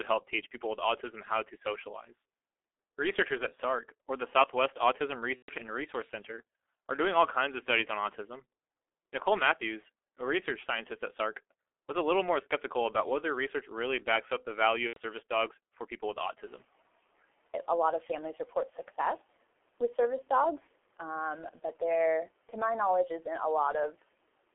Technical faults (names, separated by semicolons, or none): G.723.1 codec; VoIP packet loss concealed by the speech codec; noise suppressor catching up